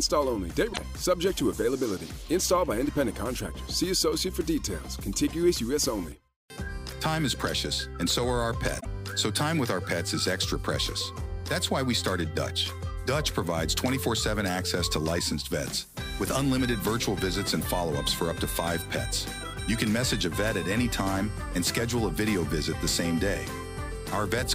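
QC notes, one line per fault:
0.69–0.79 s and 8.77–8.86 s: damaged data in a compressed stream. Two short glitches, each about 95 ms, where corrupted frames made the decoder lose sync and hunt for the next valid frame header.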